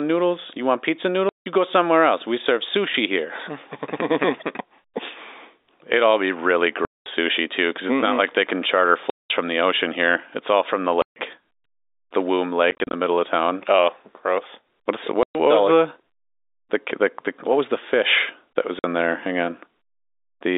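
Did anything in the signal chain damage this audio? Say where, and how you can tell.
Yes, packet loss filled with silence at the network stage. Hard-edged holes fall at 1.29, 6.85, 9.1, 11.02, 12.71 (broken up over 0.22 s), 15.23 and 18.79 s. Their lengths of 0.05 to 0.21 s come in steps that fit 10 ms packets. Digital silence rather than smoothed concealment marks missing packets.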